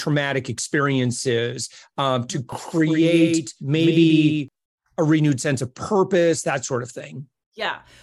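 From 2.52 to 4.48 s the speech has a doubled audio track: a second full-band copy, about 5 dB quieter, trails by roughly 150 ms, likely from a slower capture path or misaligned edit. It switches on and off abruptly; spectrograms show every syllable repeated, offset.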